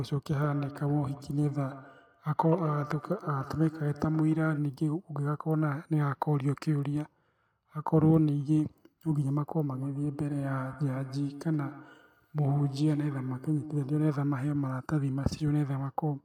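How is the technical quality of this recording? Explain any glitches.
The speech has a feedback echo between two devices. It runs from 0.5 to 4.72 s, then again from 9.73 to 14.27 s. Two devices in the room share the call. One plays back what the other's microphone sends, and that microphone hears it again. Each device's echo canceller handles only its own playback, so the loop survives. Words return about every 150 ms, thin and ringing. They peak at about 14 dB below the speech, then about 16 dB.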